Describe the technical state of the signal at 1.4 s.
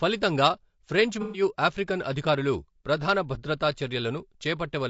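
Right at 1.4 s you're at the tail of an AAC frame loss with concealment running from about 1.22 to 1.42 s. The decoder patches in roughly 120 ms of missing audio from the last good spectrum, which leaves a smeared, noisy, phasey stretch. Underneath it all, the speech has the rough, grainy texture with noise between harmonics that likely comes from low-delay AAC compression at around 32 kbps.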